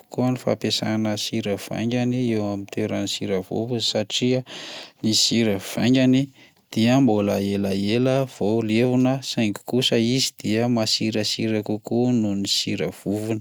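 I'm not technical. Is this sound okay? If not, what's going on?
Yes, this recording sounds fine; nothing here is wrong.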